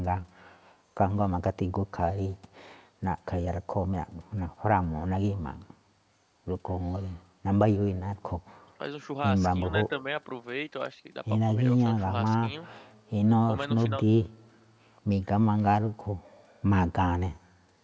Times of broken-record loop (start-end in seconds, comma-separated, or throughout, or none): none